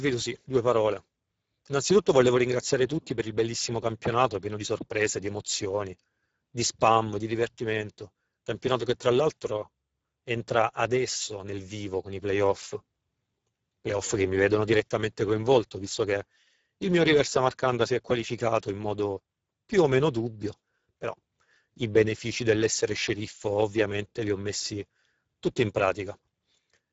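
Throughout the speech, Speex codec damage is plainly audible: with few bits for the excitation, the voice turns hoarse and noisy, which fits a bitrate near 10 kbps. The band up to 7.7 kHz survives, with nothing above it.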